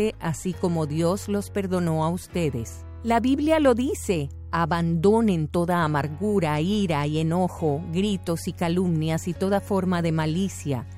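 No technical fault can be heard anywhere in the audio; the signal stays steady and intact throughout.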